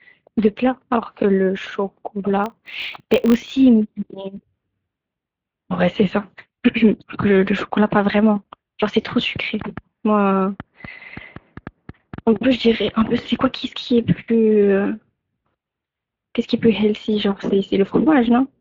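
Throughout the speech, the Speex codec leaves plainly audible damage. The CELP coder is short of bits for the excitation signal, so voiced sounds come out hoarse and grainy with a slightly mechanical edge, which points to a mid-quality wideband mode of roughly 16.8 kbps. The upper band sounds like shaped noise filling in for real detail rather than actual speech harmonics.

From 2.44 to 3.56 s, a filter restarted on every block produces a steady 50 Hz buzz over the speech. The filter drops its internal state at each block boundary and starts again from zero. This puts a small transient at the start of every block, and the repeated transients merge into a rough buzz at the block rate. The buzz gets louder and softer with the level of the speech underneath it.

From 9.61 to 13.47 s, a train of clicks runs over the audio, about twenty in all at an average of 4.68 per second. The spacing is irregular. 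The clicks all have much the same shape and peak about 10 dB above the speech, so they stand out as sharp ticking and continue through the pauses. A pattern like this is likely caused by electrical interference or a faulty connection injecting pulses into the signal path.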